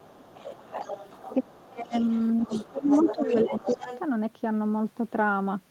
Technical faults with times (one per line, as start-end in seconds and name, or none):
0.00-0.24 speech suppressed in double talk
0.24-1.35 other side's voice leaking through
1.39-1.93 speech suppressed in double talk
1.90-4.00 other side's voice leaking through
2.46-3.90 speech suppressed in double talk